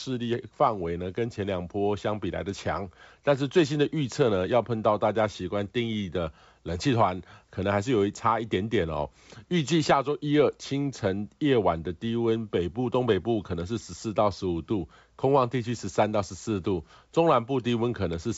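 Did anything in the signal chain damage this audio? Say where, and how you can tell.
No, nothing in the chain can be heard damaging this speech. It passes through G.722 wideband telephone coding at 64 kbit/s, which fits the way the audio stops at about 7.7 kHz with nothing above it.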